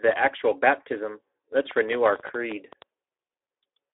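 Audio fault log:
throughout: Speex codec. The speech has been through a Speex CELP encoder at a low setting, about 11 kbps, with too few bits left for the excitation. The fine structure of the voice gets replaced by a coarse approximation, and that gives the speech a noisy, hoarse edge that is plainly audible. The sound is confined to a telephone band of roughly 300 Hz to 3.6 kHz, with nothing above 3.8 kHz, so it sounds narrow and muffled.
1.71–2.83 s: train of clicks. A burst of sharp, similar-shaped pulses, roughly fifteen of them, lands on the signal at about 12.6 per second with uneven spacing. They peak at about 10 dB above the speech, so they come through as a loud, irregular ticking or popping over everything in that stretch. The likely cause is electrical interference from nearby equipment or a faulty connection or power supply injecting spikes into the path.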